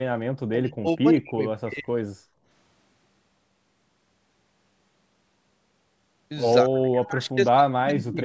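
From the start to 1.4 s and again from 1.64 to 1.95 s, the voice sinks by as much as about 40 dB. This is speech suppressed in double talk, likely an echo canceller that, with both ends talking, couldn't separate this talker from loudspeaker echo and turned everything down. Between 2.23 and 2.47 s the room sound dips by about 20 dB and then returns. This is background gated by the echo canceller, which clamped the microphone while the far end played. From 6.63 s to the end, the voice is again pulled down by roughly 40 dB, the same double-talk suppression.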